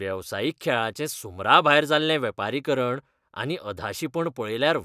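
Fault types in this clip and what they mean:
No audible faults anywhere in this speech recording.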